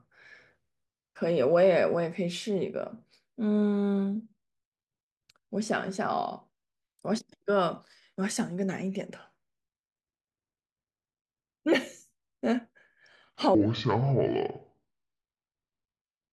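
It's a speech recording, and the last stretch runs at the wrong speed: from 13.55 s right through to the end at 16.33 s, playback drops to about 0.6 times normal, so everything turns slow and heavy and the pitch sinks by roughly ten semitones, not far off an octave. Speed and pitch falling together like that points to the section most likely having been played or resampled against the wrong clock rather than deliberately slowed with a pitch-preserving stretch.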